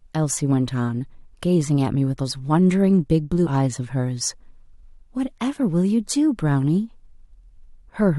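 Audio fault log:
throughout: sample clock jitter. The converter's timing wanders by a fraction of a microsecond, so each sample lands marginally early or late. The resulting error scales with how fast the waveform is changing, which puts a faint hiss and graininess, roughly 45 dB under the signal, on the steep, bright parts of the speech: sibilants and loud onsets. It rises and falls with the speech and disappears in the pauses, where nothing is moving.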